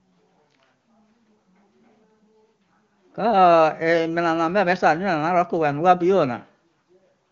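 No technical faults are audible in the speech, which carries the roughly 7 kHz bandwidth of AMR wideband (HD Voice) coding at a clear, high-rate setting consistent with its top 23.85 kbit/s mode.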